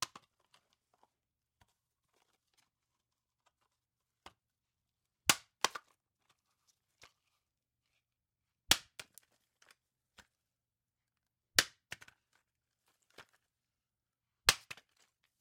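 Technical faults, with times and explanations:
5.69 to 7.00 s and 9.64 to 10.23 s, processor overload crackle: the sound breaks into gritty tearing twice, the first burst longer. Audio buffers keep missing their deadlines and are skipped. The tiny hard-edged gaps suggest buffers under a millisecond, many dozens lost per burst.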